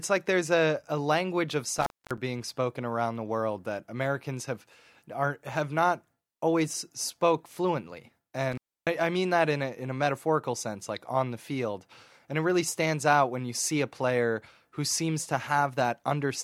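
Speech with two dropouts from an intermittent contact, at 1.78–2.18 s and 8.52–8.87 s. A loose plug or cable opens for roughly 244 ms and then 292 ms, crackling at each edge and leaving faint hiss while the line's broken.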